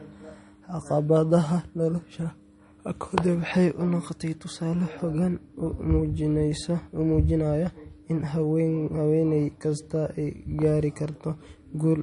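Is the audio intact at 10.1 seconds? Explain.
No. At 10.1 s, as throughout the clip, the speech carries plainly audible damage, likely from MP3 compression. Nothing remains above 10.6 kHz, and weak frequency lines switching between frames give a watery, swirly texture, consistent with bits running short near 40 kbps.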